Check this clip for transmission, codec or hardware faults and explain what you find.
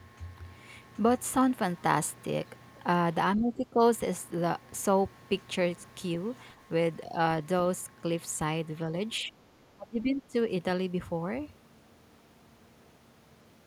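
Speech suppressed in double talk occurs at 3.37–3.8 s, 9.21–9.32 s and 9.76–10.35 s. An echo canceller likely could not separate the near talker from far-end echo during simultaneous talk and attenuated the near talker, causing level dips of about 10 dB, a few dB, and about 25 dB respectively.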